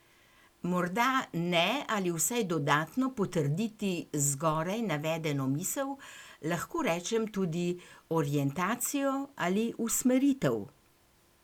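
Speech recording with a DC step: at 4.52 s the waveform's zero line jumps by about -42 dBFS, giving a low thump, and the offset holds until 6.79 s, when it returns with a second thump. The speech itself continues unchanged throughout.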